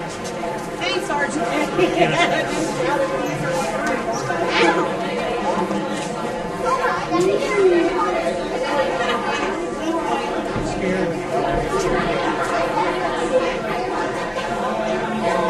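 Channel delay (comb filtering) throughout: one channel lags around 5 ms, so the mono sum notches evenly spaced frequencies from about 100 Hz, sounding hollow.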